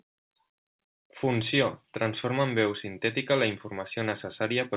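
No technical faults are audible.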